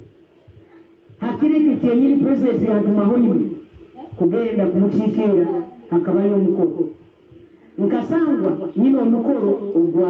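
Gain pumping runs through the whole clip, with the level swinging by roughly 5 dB. Loud and soft moments sit closer together than they should, so everything feels squashed. The likely cause is input gain set far too hot, with a fast limiter clamping down on every peak. The call's microphone processing is audible too, with nothing above 8 kHz.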